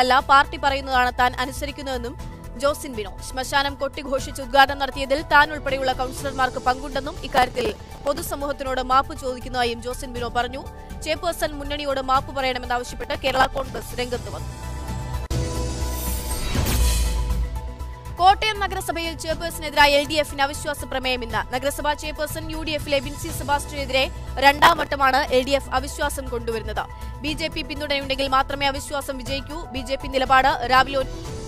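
The processor repeatedly falls behind on its small buffers, around 3 ms each, so dozens of stale fragments replay with hard edges. This processor overload crackle tears gritty bursts through the sound from 7.31 to 8.27 s, 12.87 to 13.99 s, and briefly 24.59 to 24.87 s.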